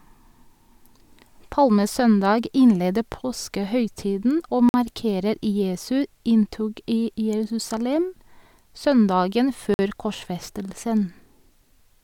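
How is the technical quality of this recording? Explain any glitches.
The recording has two brief interruptions caused by a gap between chunks. The first runs from 4.69 to 4.74 s and the second from 9.74 to 9.79 s. Each lasts 50 ms, and they are 5 s apart. The audio appears to have been delivered in 5-second blocks, with a short stretch of silence inserted at each join. Nothing is dropped; the speech after each join simply arrives slightly later.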